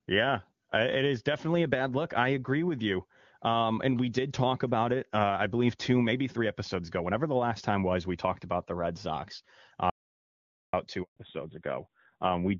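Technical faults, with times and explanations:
9.90–10.73 s, audio dropout to silence: speech cuts abruptly to silence for about 830 ms, with no room tone left, likely from a lost input while recording continued.
11.03–11.17 s, handover gap: a 140 ms silence where speech dies away within milliseconds rather than cutting hard, because no speech frames arrived while the call switched networks.
11.17 s to end, fallback to narrowband: the call drops from AMR-WB HD Voice at 23.85 kbit/s to AMR-NB at 7.4 kbit/s, removing everything above 4 kHz, so speech turns duller and rougher.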